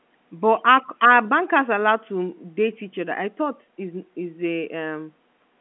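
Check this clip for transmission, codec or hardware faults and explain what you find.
No transmission, codec or hardware faults are audible: the speech carries the normal narrow telephone band of G.711 A-law coding, roughly 200 Hz to 3.4 kHz and consistent with a 64 kbps line, after ordinary call microphone processing that has trimmed the lowest bass.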